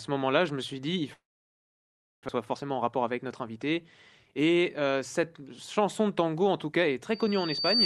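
From 1.13 s to 2.31 s the speech stops: the last sound smears briefly into a fading buzz, then roughly a second of silence follows before the audio resumes with that stretch missing. This is likely a long network dropout, where packets stopped arriving and the receiver concealed the gap.

Between 2.39 s and 3.33 s the speech sounds hurried but keeps its pitch, running at about 109% speed. This is a jitter buffer speed-up: after the dropout the buffer was holding excess audio, so short pitch-period pieces were trimmed repeatedly, about a tenth of a second in total.

Right after "de tango en tout", from 7.11 s to the end at 7.85 s, a piercing tone near 4.6 kHz swells over roughly 0.7 s until it sits about 5 dB above the speech. This is loudspeaker feedback squeal: the microphone picked up its own loudspeaker, and at that frequency the loop gain exceeded one, so the tone kept growing.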